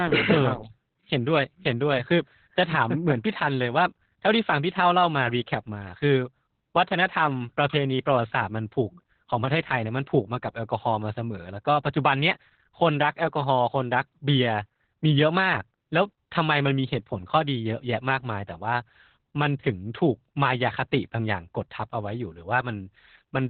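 From start to finish the speech carries Opus voice compression in its narrowband SILK mode: nothing survives above 4.5 kHz, and the excitation is coded so coarsely that voices turn muffled, hoarse and faintly robotic, which fits a bitrate around 8 kbps. A plain low-pass filter would dull the top end but leave the voice smooth. Here the buzzy, synthetic roughness of heavily quantised linear-prediction coding marks it as a speech codec.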